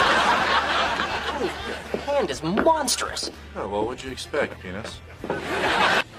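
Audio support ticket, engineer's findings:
Damaged data in a compressed stream, 4.51–4.53 s. Brief disruption of about 20 ms in the audio. Probable component: the compressed file or stream upstream of the decoder. Mechanism: bytes there lost, zeroed, overwritten or mixed with foreign data; decoder misreads or rejects those frames, loses sync and resumes at the next valid frame header.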